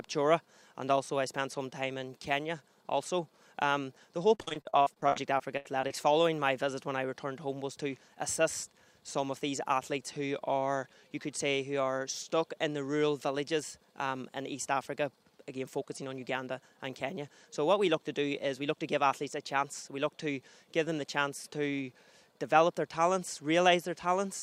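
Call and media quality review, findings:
Repeated packet loss (robotic sound), 4.34–5.91 s: 15 gaps, longest 79 ms, about 28% of the span concealed (roughly 0.44 s filled). Probable component: network path or jitter buffer. Mechanism: lost or late packets, each hole patched by extending the preceding audio, so the stretch turns choppy.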